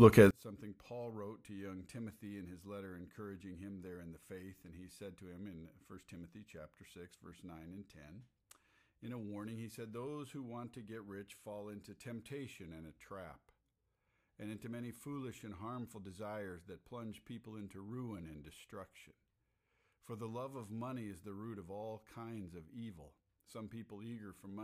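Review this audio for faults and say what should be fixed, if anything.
One stereo channel has likely been wired or processed with reversed polarity, a one channel inverted fault running from 0.31 s to the end at 24.64 s. Because the speech sits equally in both channels, summing to mono cancels it and drops the level by about 27 dB, leaving only a faint residue of whatever differs between left and right. Checking polarity with a correlation meter or mono fold-down before delivery would catch this.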